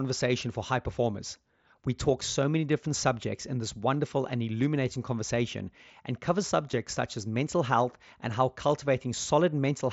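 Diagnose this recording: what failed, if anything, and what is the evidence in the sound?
A barely audible smear at 6.72 s and a brief buzzy tone at 9.22 s, lasting 7.5 and 15 ms: concealed Bluetooth headset packet loss, with the wireless link's lost packets patched by repeating recent waveform.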